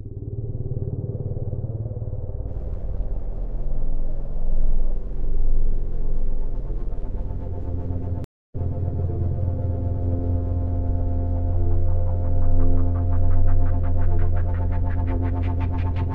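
At 8.24 s the everyday sound drops out for about 280 ms, and when it returns at 8.55 s it has jumped ahead, skipping roughly a third of a second of material instead of picking up where it left off. This is a stream reconnect: the connection broke, the player went quiet while it re-established the link, then started a fresh decoder partway through a live stream, so the audio resumed at a later point.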